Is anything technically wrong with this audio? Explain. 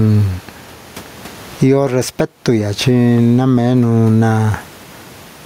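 Yes. Gain pumping runs through the whole clip. The room background sits about 37 dB below the speech, and the gain swings by about 15 dB. The likely cause is microphone gain set far too high, with a fast limiter pulling it down. The speech sounds squashed.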